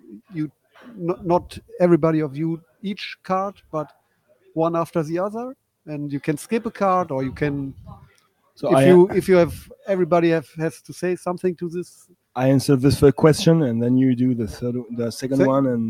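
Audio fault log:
throughout: noise suppressor applied to music or sounds. A suppressor built for speech treats steady material as noise, so the level swings by a few decibels and sustained parts pump and thin.
3.57–3.73 s, 3.90–4.56 s, 8.00–8.58 s: sound cut by the noise suppressor. The sound is mistaken for noise and pulled down by about 11, 17 and 18 dB, sinking in level.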